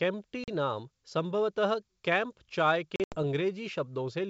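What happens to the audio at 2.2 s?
Nothing goes wrong at 2.2 s: the speech passes through intact, with at most a faint trace of the upper-band hiss that G.722 wideband telephone coding leaves.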